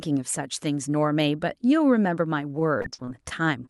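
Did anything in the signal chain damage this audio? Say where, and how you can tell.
Yes, at the network stage. From 2.59 s to the end at 3.69 s, repeated packet loss gives robotic sound: eight short gaps, the longest 37 ms, are patched by stretching the preceding sound, so about 14% turns choppy rather than dropping to silence, as a plain dropout would.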